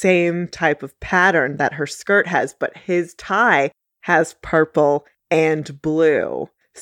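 No faults can be heard anywhere in the speech recording.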